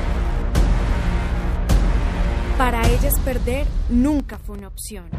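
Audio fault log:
4.20 s to end, sudden gain jump: likely a gain change applied without a ramp, so the sound and background noise drop together by about 6 dB at once.
4.34–4.59 s, processor overload crackle: the processor missed several very short buffer deadlines in a row, leaving tiny silent gaps with hard edges that are heard as gritty crackle.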